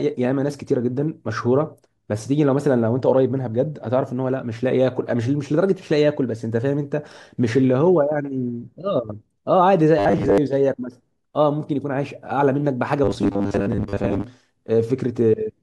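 From 9.99 to 10.38 s and 13.04 to 14.24 s, the speech becomes a stiff, metallic 100 Hz buzz. This is robotic sound from repeated short buffers. It is likely caused by 10 ms blocks repeating in place of about half the audio.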